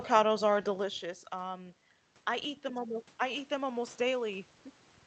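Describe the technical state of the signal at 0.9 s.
At 0.9 s the signal is early in an automatic gain rising episode that runs from 0.65 to 4.52 s. The input level fell by about 11 dB, around when the talker moved back near 0.5 s, and the gain control is slowly lifting by about 5 dB to compensate. Voice and room noise swell together. On a waveform the envelope widens gradually, and on a spectrogram the background floor brightens along with the speech.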